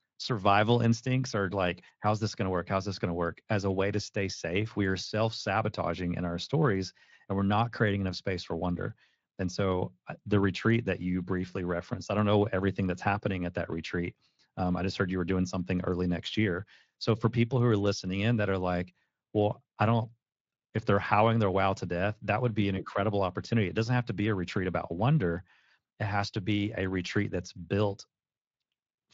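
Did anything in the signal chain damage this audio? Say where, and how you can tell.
No, nothing in the signal chain damaged this audio.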